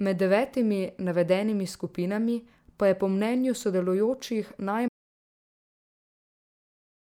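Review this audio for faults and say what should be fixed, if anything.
Audio dropout to silence from 4.88 s to the end of the clip: the speech stops mid-flow and the last 2.2 s hold nothing at all, not even room tone, so the recording chain kept writing silence after its input vanished. The likely cause is a lost input, such as a microphone or interface disconnecting, a failed link or an accidental mute. Whatever was said in that stretch is unrecoverable and needs re-recording. To prevent it, secure cables and connections, check mute states, and monitor input levels live so a dead signal is noticed immediately.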